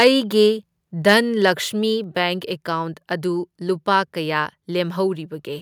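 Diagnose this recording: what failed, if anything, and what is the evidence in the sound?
Right at the start, 0.00 to 0.08 s, and again from 1.09 to 1.14 s, the loudest bits of the speech pick up a harsh, crackly edge. That's microphone overload at the converter stage, most likely. The input was driven roughly 4 dB past full scale in the first burst and about 3 dB in the second, so the peak tops get sliced flat. Only a small slice of the samples, around one and a half percent, is hit in each spot.

Between those two bursts there's a sudden small drop in level at 1.02 s, with voice and background both stepping down together by about 2 dB. That pattern points to a microphone volume stepped down by the call processing, likely the software reacting to the clipping at the start and lowering the device's input gain in a single step. The cut wasn't enough, though, since the second overload still lands just afterwards.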